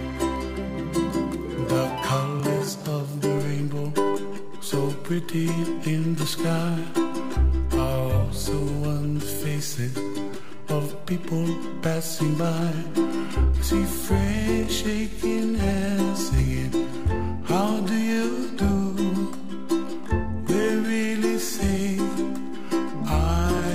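At 3.38 s a DC step occurs: the waveform's zero line jumps to a fixed offset of about -30 dBFS and holds there through the end of the clip. The jump itself is heard as a single low thump, and the sound carries on unchanged across it. What separates this from an ordinary click or pop is that the baseline never returns, so the shift persists as a constant offset rather than a brief spike.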